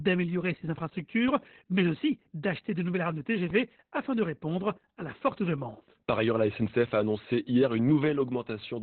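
The clip is speech, and it carries heavy Opus voice compression from start to finish. Nothing is audible above about 4.3 kHz, so the band has been cut to narrowband and the speech sounds muffled and telephone-like. The coarse excitation coding of the SILK linear-prediction coder leaves the voice hoarse and slightly robotic. This damage points to a very low bitrate, around 8 kbps.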